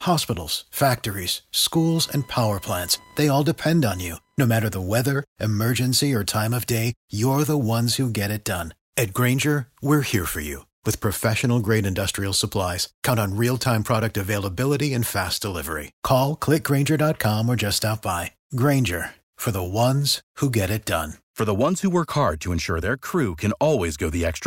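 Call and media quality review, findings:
Computer activity noise, 1.76 to 4.60 s. Buzzy chirping under the speech, pulsing at around 1 kHz, about 30 dB below the signal. Starts and stops on its own. Probable component: shared ground of the capture interface. Mechanism: processor, graphics or mouse load shifts the ground, which is picked up as an audible buzz.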